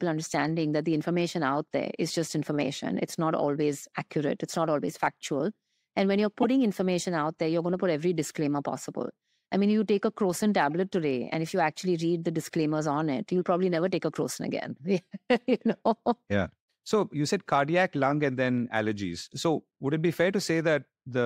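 A brief glitch at 6.42–6.45 s, before "information out there you're", and another at 10.71 s, before "today and if you", come from damaged data in the compressed stream, which sends the decoder hunting for the next frame.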